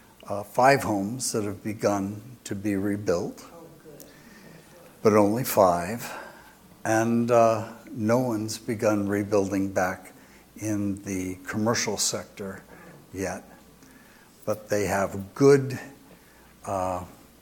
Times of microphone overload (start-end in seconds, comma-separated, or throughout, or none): none